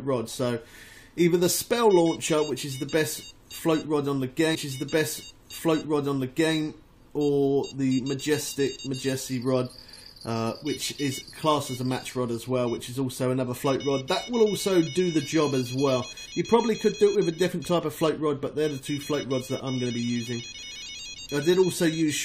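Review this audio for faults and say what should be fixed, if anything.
From 4.54 to 6.54 s, about two seconds of audio plays again after a small blip at the jump back: a stream segment repeated because the player fetched or queued it twice. To prevent it, have the player track segment sequence numbers and drop any duplicate before it is queued for playback.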